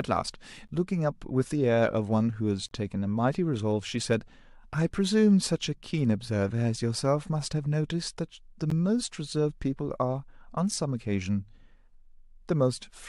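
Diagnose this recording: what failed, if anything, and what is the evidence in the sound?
Playback stage: gaps between stream segments, where mismatched 2-second segment timestamps leave silence that the player inserts. Hard-edged holes fall at 0.68, 2.69–2.71, 8.70 and 10.71 s, roughly 5 to 27 ms long. They appear as blank vertical strips on a spectrogram and flat near-silent stretches in the waveform.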